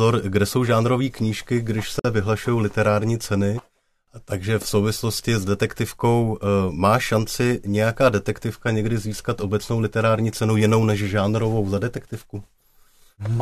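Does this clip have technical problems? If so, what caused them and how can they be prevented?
Yes: a gap at a join of encoded pieces, 1.99–2.05 s, after "jsou žánrové knížky když". Untrimmed encoder padding leaves a 52 ms silence before "vyhlašují literární ceny". Trim encoder delay and padding, or encode gaplessly.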